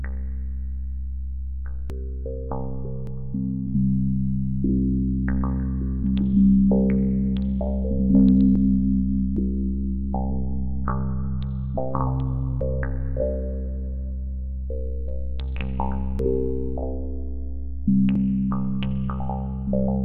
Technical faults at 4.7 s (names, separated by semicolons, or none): none